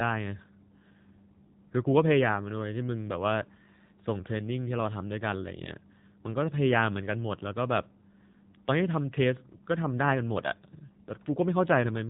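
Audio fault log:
Throughout: AMR narrowband mobile codec. The speech went through a low-rate mobile speech coder, consistent with AMR-NB at about 7.4 kbps, so nothing above 3.8 kHz survives and the rebuilt voice sounds plainly buzzy, muffled and synthetic, like a 2G phone call.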